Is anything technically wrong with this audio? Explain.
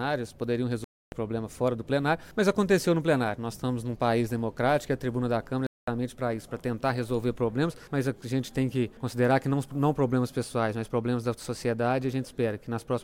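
Yes. The sound cuts out twice, from 0.84 to 1.12 s and again from 5.67 to 5.88 s, gaps of about 280 ms and 210 ms. When the sound returns it has moved on, as though it kept playing through the silence. This is likely a Bluetooth dropout: audio packets failed to reach the headphones in time and were discarded, leaving silence until the next good packets arrived.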